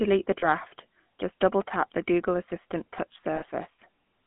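The speech has passed through the GSM full-rate codec, consistent with a 13 kbit/s stream, band-limited to 150 Hz to 3.4 kHz, with plainly audible buzzy, gravelly roughness. Lost GSM frames from 0.40 to 0.44 s and 3.36 to 3.44 s were concealed by repeating earlier frame parameters, producing brief rough, metallic ringing holds.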